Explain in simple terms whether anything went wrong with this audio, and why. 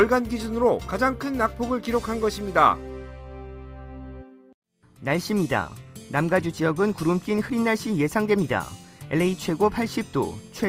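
Nothing went wrong here.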